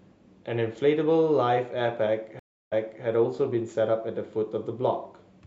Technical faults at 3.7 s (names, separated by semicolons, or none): none